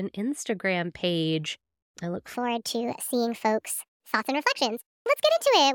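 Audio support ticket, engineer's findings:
2.34 s to end, after "page I look": speech high and hurried, 1.38x speed, about 5.5 semitones up. Wrong sample rate, playback path. Samples replayed unconverted, so speed and pitch scale together; fits 32 kHz audio clocked out at 44.1 kHz.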